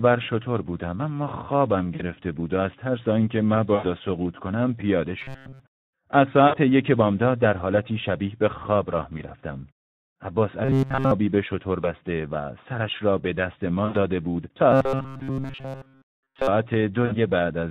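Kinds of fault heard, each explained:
Speex codec: Throughout the speech the Speex codec, running at 11 kbps, is plainly audible. A CELP coder at this rate has too few bits to describe the excitation properly, so the voice comes out hoarse and grainy with a noisy edge. Any content above 4 kHz is only a shaped noise fill rather than real detail, which gives the top end a hissy, synthetic quality.
VoIP packet loss concealed by the speech codec: Dropouts occur at 1.95, 3.75, 6.48, 9.18, 11.81, 13.85 and 17.05 s, each covering roughly 20 to 80 ms of lost audio. At each gap the decoder keeps extending its last pitch and filter while turning the gain down, so the sound smears into a fading buzzy or coloured-noise tail. Each decoded frame depends on the one before, so the voice stays weak and distorted for a short time after real packets resume.
Robotic sound from repeated short buffers: Metallic, rigid buzzing runs from 5.19 to 5.60 s, from 10.65 to 11.11 s and from 14.72 to 16.48 s, pinned at a steady 134 Hz. 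That pitch fits a segment of about 7.5 ms being looped. The likely cause is fresh audio arriving too slowly, so the last short buffer is replayed while the real signal is skipped. In the first stretch this happens most of the time, and in the later two it is continuous.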